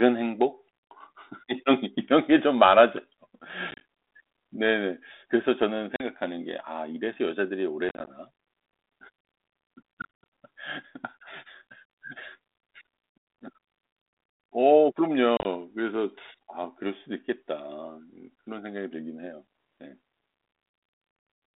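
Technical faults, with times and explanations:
3.71–3.81 s, 5.96–6.04 s, 7.89–8.16 s, 10.02–10.26 s and 15.37–15.46 s, packet loss on an ADPCM call: the speech drops into hard-edged silent gaps, from a single 40 ms hole to a 180 ms loss broken up across 300 ms, and each time comes back with brief roughness. Handfuls of packets went missing on this 32 kbit/s G.726 line, which carries roughly 250 Hz to 3.7 kHz. The ADPCM decoder's predictor and step size then no longer matched the sender's and took tens of milliseconds to realign.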